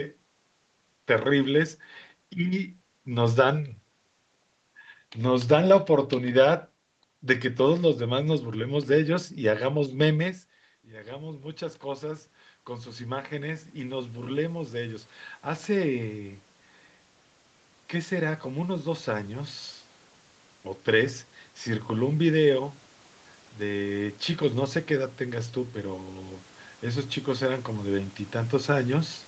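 A speech recording with two episodes of automatic gain rising. After the talker moves away at around 10 s, the input drops by about 17 dB. From 10.84 to 16.47 s the gain control slowly climbs by about 11 dB, and voice and room noise swell together. A second rise of about 6 dB runs from 23.59 to 29.21 s, again lifting the background with the voice. The sound stays band-limited to 8 kHz throughout.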